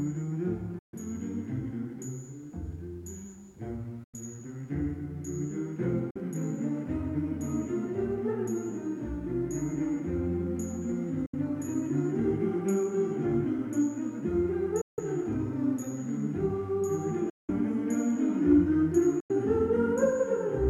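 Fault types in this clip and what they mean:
Bluetooth dropout: seven abrupt holes of silence between 0.79 s and 19.3 s, lasting from 46 ms up to 186 ms. Each time the sound comes back further along, as though it kept running underneath, which likely means packets missed their slot on the wireless link.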